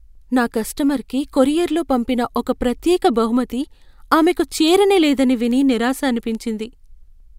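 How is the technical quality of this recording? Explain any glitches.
Sharp, uneven ticks run through the speech about once a second from 0.48 s to 7.19 s, roughly ten in all. These are word clock ticks: the receiving device's clock drifts by roughly 30 ppm from the sender's, so each slip misreads samples and drops or repeats one.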